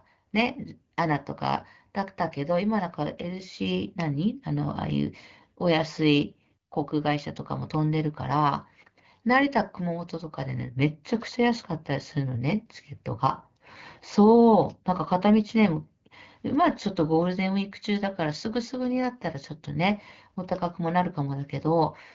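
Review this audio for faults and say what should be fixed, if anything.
No faults need fixing: the speech comes through the AMR wideband (HD Voice) codec at 12.65 kbit/s, where the band up to 6.4 kHz stays clear, the top band to 7 kHz is filled with shaped noise, and the codec adds only a light coded character.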